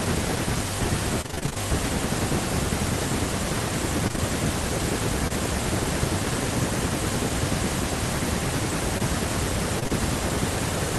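From 1.21 to 1.58 s the speech breaks up with repeated packet loss, giving a robotic sound. Short holes of up to 28 ms, consistent with 20 ms packets, arrive one after another, and the receiver patches each by extending the last bit of sound. About half of that stretch is synthesized fill, so the speech turns choppy, with pieces missing. The same effect returns more briefly from 4.08 to 4.20 s, where about half the span is again concealed.

At 5.28 to 5.32 s a single short concealed packet loss of about 20 ms occurs. The decoder bridges the hole by continuing the preceding sound and then cross-fades back into the real signal, which is heard as a brief smear or wobble rather than a clear gap.

From 8.98 to 9.92 s repeated packet loss recurs, but it is sparser. A handful of gaps of up to 26 ms are spread across nearly a second, filling only about 8% of the span, so the robotic texture comes through as scattered stutters.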